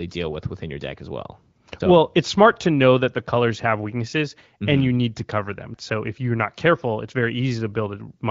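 No technical faults can be heard anywhere in this speech recording. It has passed through the AMR wideband (HD Voice) codec at 15.85 kbit/s, a rate at which the speech stays clear, with only light coding colour and the band above 6.4 kHz filled in by shaped noise.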